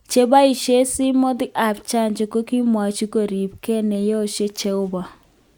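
No technical faults detected.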